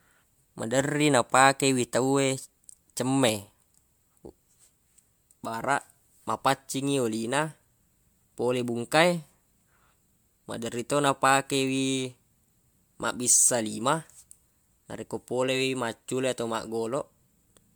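From start to finish the speech carries what sounds like generation loss, most likely from being run through an MP3 encoder around four times over. Each pass re-quantises on a shifted frame grid, so the damage stacks: there's a swirly, hollow quality and smeared consonant attacks that seem worse than a single 128 kbit/s encode would give. The top end still reaches about 20.1 kHz, so it's smear rather than dullness.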